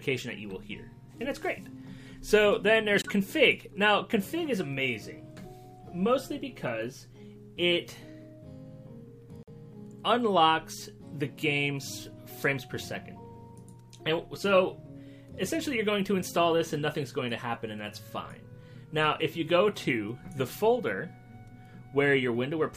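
At 3.02 s the audio drops abruptly into silence until 3.10 s, and at 9.43 s it does so again until 9.49 s. Both are corrupt frame muted faults: flipped bits left compressed frames undecodable, so the player substituted silence. Each gap, about 77 ms and 60 ms, is consistent with a run of roughly three lost frames. The cut-ins are sharp, and the sound resumes on schedule with no timing shift.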